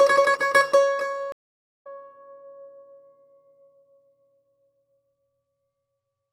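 At 1.32 s the music drops into a stream reconnect: the connection broke, playback fell silent for about 530 ms, and a fresh decoder picked the stream up again at 1.87 s. What sets this apart from an ordinary dropout is the jump in the music itself. It resumes roughly 0.4 s further along, so a slice of the performance is simply missing, and the first frame comes back fading in rather than with a hard edge.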